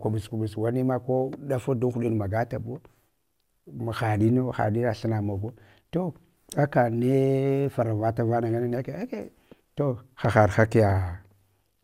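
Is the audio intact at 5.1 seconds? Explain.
Yes, the speech plays through intact at 5.1 seconds, with no dropout, click, distortion or other fault at that moment.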